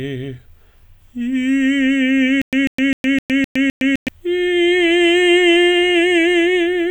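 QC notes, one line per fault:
2.42 to 4.08 s, stutter with silent gaps: the same 145 ms burst of music repeats six times, each followed by about 112 ms of dead digital silence, so it pulses at a steady 257 ms period before the music resumes. This is likely a stalled player or stream replaying its last fragment at each retry, and the music meant for that span is lost. The identical repeated burst and the regular, truly silent gaps distinguish it from simple dropouts or crackling underruns.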